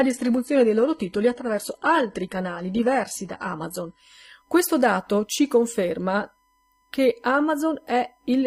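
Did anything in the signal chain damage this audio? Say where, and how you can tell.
Yes. In the analogue wiring, a steady 1 kHz USB whine sits about 45 dB below the speech throughout. Bus frame current leaks via power or ground, showing on a spectrogram as a thin horizontal line.

At the network and codec stage, the adaptive stream starts at a low bitrate. From 0 to 4.0 s nothing appears above 11.8 kHz and artefacts are heavier. The spectrogram's ceiling then jumps upward without a gap, which fits a switch from low-rate HE-AAC to higher-rate AAC-LC.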